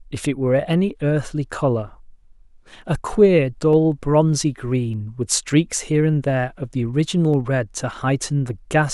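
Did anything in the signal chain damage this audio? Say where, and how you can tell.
Yes. Regular clicks every 0.6 s from 0.13 to 8.54 s appear as thin vertical spectrogram lines. These are likely clock drift buffer slips at the driver buffer, each dropping or repeating a few samples.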